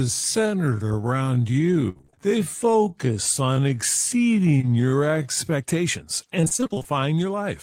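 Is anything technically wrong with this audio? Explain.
Yes, two things stand out. From the start to about 5.54 s there's a time-stretched section. The speech runs at roughly half speed (0.53×) with its pitch held, so it drags. That's likely software padding the audio out by repeating short slices.

There's also repeated packet loss giving a robotic sound, twice. From 1.89 to 2.18 s there are six quick holes patched over, covering more than half that stretch. From 6.41 to 7.00 s, just before "your life", there are twelve shorter ones. Each gap gets filled by dragging out the last bit of sound, so it comes across choppy with pieces missing.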